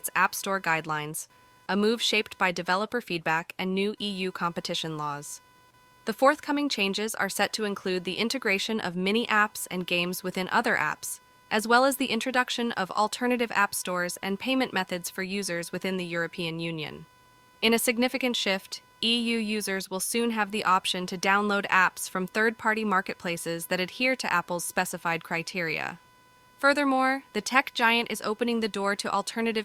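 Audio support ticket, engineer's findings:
Faint buzzing chirp, pulsing around 500 Hz, about 30 dB under the speech, throughout. Computer activity noise: processor, graphics or mouse load disturbing the shared audio ground.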